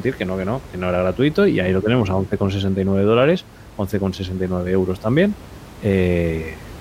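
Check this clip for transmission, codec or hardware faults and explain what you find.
No transmission, codec or hardware faults are present.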